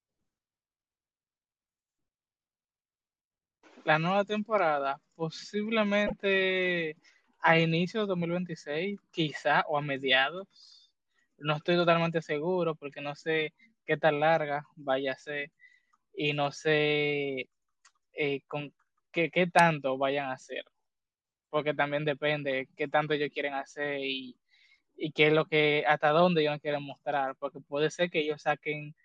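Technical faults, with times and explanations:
6.06–6.13 s, broken MP3 bit reservoir: the speech skips forward and the next 64 ms come out garbled. The likely cause is missing MP3 frames; the frames that follow look back for borrowed data and decode bytes from the wrong frame. That garbled stretch spans under three frames of about 24 ms. A plain dropout would leave a clean gap, and a repeated-packet fault would reuse earlier sound.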